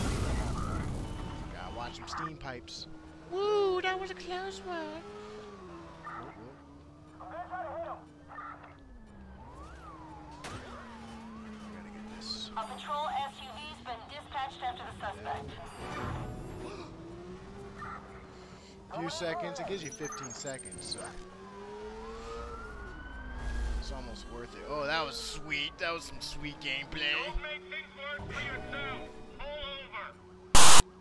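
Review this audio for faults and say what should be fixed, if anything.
File tags played as audio, from 30.55 to 30.81 s: near the end, a block of text metadata is decoded as if it were sample data. The character bytes come out as a loud, harsh rasp pushed off-centre, and the zero padding that follows reads as dead silence, so the burst starts and stops with hard edges instead of fading. To prevent it, make the decoder or export tool honour the file's chunk boundaries so that tag and padding blocks are skipped rather than rendered as audio.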